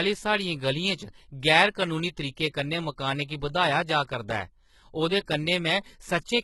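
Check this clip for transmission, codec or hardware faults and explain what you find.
One codec fault runs through the whole clip: the speech carries heavy damage consistent with HE-AAC compression, most likely HE-AAC v2 at a very low bitrate, around 16 kbps. Only the lower spectrum appears properly coded. The treble is rebuilt by copying lower bands upward under a coarse envelope, so its harmonics fail to line up with the real ones below. Sibilants come out gritty and metallic, and nothing is present above 11.8 kHz.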